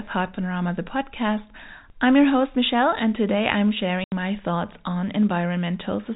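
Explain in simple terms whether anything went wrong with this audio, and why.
Packet loss filled with silence cuts out the speech from 4.04 to 4.12 s. For about 80 ms the sound simply stops, then resumes abruptly, with hard edges on each side. The speech travelled as a stream of small data packets, some went missing, and the receiver played silence instead. A gap of that length fits four 20 ms packets lost in a row. The narrow, telephone-like sound comes from the phone-line coding.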